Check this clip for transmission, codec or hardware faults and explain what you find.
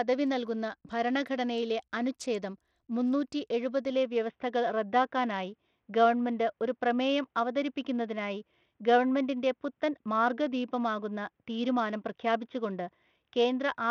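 Two faults are audible: codec damage across the whole clip, and a drop in bandwidth partway through.

Bluetooth SBC compression: From start to finish the speech carries a gritty, grainy texture, with treble that thins and flickers rather than holding steady. This is likely SBC coding at a small bit pool. The codec splits the signal into a few wide sub-bands with crude bit allocation, so the weak upper bands get starved and the rest are coarsely quantised. The damage is plainly audible, which fits a low bitrate around 80 kbps.

Input switched to a poorer device: At 3.9 s the sound turns duller and boxier and stays that way to the end. Nothing remains above 3.8 kHz, and a faint new noise floor appears well below the speech. There is no gap at the change, and the level stays about the same. The likely cause is the system moving to a narrower-band input, such as another microphone or a headset call profile, in mid-recording. 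That input's limited passband and its own self-noise replace the original pickup.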